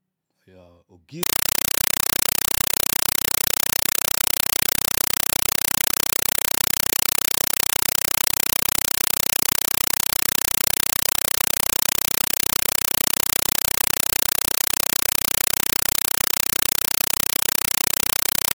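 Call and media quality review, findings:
Compressed stream played as audio, 1.23 s onward: loud chattering static, undecoded AC-3 bitstream. Waveform: 5.33 ms bursts at 31.25 Hz, zero-filled gaps; spectrogram: broadband stripes.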